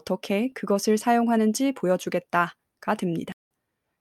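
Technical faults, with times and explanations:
3.32–3.45 s, corrupt frame muted: bits inside the compressed stream were damaged, the decoder rejected what it received, and the player substituted silence for the lost stretch rather than guessing at it. The speech drops out abruptly into a dead hole of about 0.13 s, a length that fits two consecutive frames of roughly 63 ms each. Because the silence fills the gap exactly, timing is kept and the speech resumes in place afterwards.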